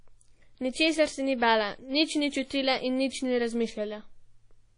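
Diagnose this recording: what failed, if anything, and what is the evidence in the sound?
At the codec stage, the speech carries plainly audible WMA compression throughout: a ringing, washy hiss that swells and fades with the signal, which fits a low bitrate around 32 kbps. A spectrogram shows a hard ceiling at 10.1 kHz and patchy holes where weak components were zeroed, likely from long-block transform quantisation.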